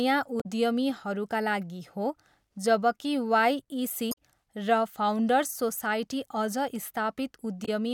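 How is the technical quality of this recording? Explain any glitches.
The speech recording has three brief glitches from damaged data in a compressed stream, at 0.40 to 0.46 s, 4.11 to 4.18 s (right after "लागि हो जबकि वाइइसी") and 7.65 to 7.69 s. Corrupted bytes make the decoder misread frames and hunt for the next header, so each is a short chirp, squawk, click or hole. A plain dropout would be silence instead.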